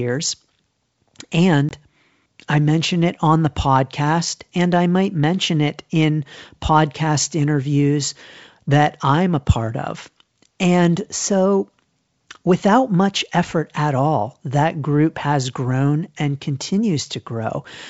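At about 1.69 s there's packet loss on an ADPCM call. A roughly 20 ms chunk, a couple of packets' worth, drops out to hard silence. The decoder's predictor and step size then lose sync, so the speech comes back slightly distorted before settling.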